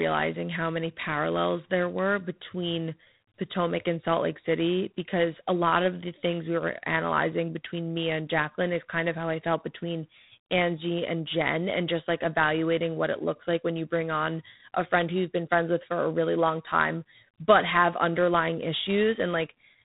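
From the start of the clip, the speech carries G.726 ADPCM damage that is plainly audible. Nothing above 3.9 kHz gets through, and a harsh, rasping hiss rides on the speech, rising and falling with its level. The hiss comes from coding each sample as a coarse difference from an adaptive prediction. The graininess points to G.726 running at 24 kbit/s, below the 32 kbit/s rate where the codec sounds cleaner.

At 11.28 s a single sharp click cuts through the speech, which suggests dropped samples. The likely cause is that roughly one sample went missing from the stream, so the waveform jumped straight from one value to a later one. The loss is far too brief to take away any audible sound. Only the discontinuity remains, heard as the click and seen as a thin vertical line across the spectrum.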